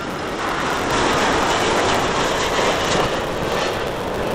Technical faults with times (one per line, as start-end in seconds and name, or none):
0.00-4.35 block size mismatch (truncated)